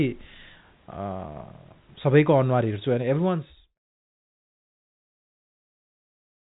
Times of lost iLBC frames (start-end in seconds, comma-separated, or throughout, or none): none